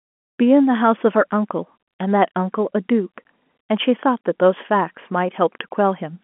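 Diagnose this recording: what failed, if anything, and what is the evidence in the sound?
Nothing failed at any stage.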